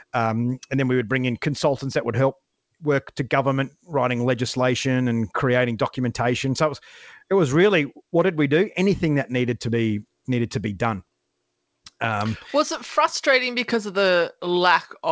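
No technical faults can be heard in this speech: it has the ordinary sound of a call path, with the usual coding texture and nothing above 8 kHz, which fits a wideband codec such as G.722 at 64 kbps.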